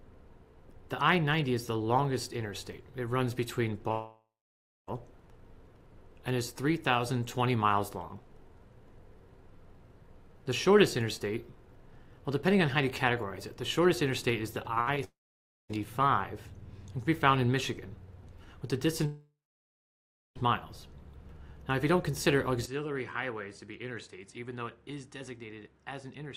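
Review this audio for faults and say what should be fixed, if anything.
Long network dropouts occur at 3.91 to 4.89 s, 15.04 to 15.71 s, and 19.06 to 20.37 s. Each starts with a fading buzz or hiss, then goes silent for about 0.58, 0.55 and 1.0 s. The sound resumes with the gap lost. The likely cause is audio stopping in transit. A more robust connection and a larger jitter buffer would prevent this.

Repeated packet loss (robotic sound) runs from 14.63 to 14.98 s. Four short holes, the longest 65 ms, are patched by stretching the last sound. About a third of that span is concealed, so it turns choppy. Forward error correction or a steadier network would prevent this.

The input likely switched to a poorer device at 22.66 s, with no silence at the switch, and stays that way to the end. The sound turns duller, with nothing above 10.7 kHz. It drops about 10 dB in level, and a faint new noise floor appears. 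Locking the input device before recording would prevent this.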